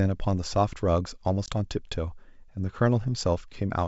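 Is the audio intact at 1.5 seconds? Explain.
No, packet loss on an ADPCM call hits from 1.46 to 1.49 s. About one packet's worth, 20 ms, drops to silence. The G.722 decoder's predictor and step size then lose step, so the speech resumes slightly distorted. On the waveform it is a flat gap with sheer edges, and on the spectrogram a blank vertical stripe.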